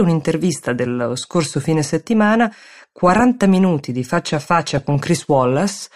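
DAB burbling hits this speech at 3.09 to 3.21 s and again at 4.6 to 4.95 s, each with 15 frames hit at a bit error rate of roughly 0.2%. Uncorrected bit errors corrupt sample values, giving short blips of noise in single sub-bands.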